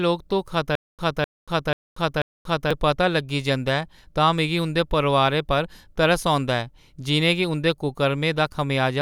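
Stutter with silent gaps runs from 0.75 s to 2.71 s in this speech clip, just before "ते पता लग्गी जंदा". A burst of about 254 ms plays, then about 234 ms of dead digital silence, repeating four times on a steady 488 ms cycle. The likely cause is a playback or stream stall, with each retry re-sending the last buffered fragment before running dry. The audio that belonged in that span never arrives.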